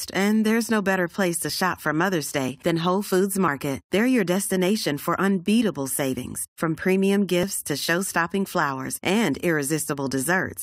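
At 3.48, 4.47, 6.45 (just before "from premium") and 7.43 s (just after "savings from premium"), overlap between stream segments trims about 10 to 17 ms from the speech, so the waveform jumps into a tiny skip. The placement on a one-second segment grid and the absence of any inserted silence distinguish it from a dropout.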